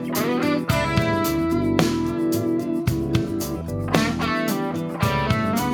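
No technical faults can be heard anywhere in the recording; the signal runs without dropouts, clicks, distortion or level disturbances.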